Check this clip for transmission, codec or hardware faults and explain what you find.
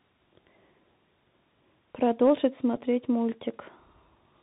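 Two faults are present: a narrowband Bluetooth codec throughout, and one brief packet repeat.

Bluetooth CVSD headset codec, whole clip. One-bit slope coding, which fits a 64 kbps stream, cuts everything above 4 kHz, roughens s sounds and leaves granular hiss.

Bluetooth headset packet repeated, at 2.76 s. About 7.5 ms of lost audio, fitting two lost packets, was refilled with stale data, giving a brief buzz near 267 Hz.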